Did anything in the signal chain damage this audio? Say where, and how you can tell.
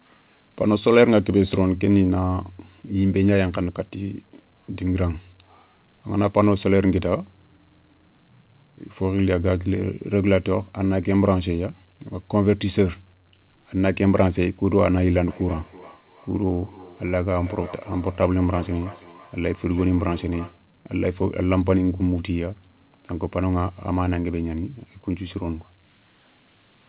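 Yes: feedback echo between two devices, 15.28 to 20.67 s, in call processing. The speech returns about every third of a second, roughly 21 dB down, re-captured by a second device's microphone.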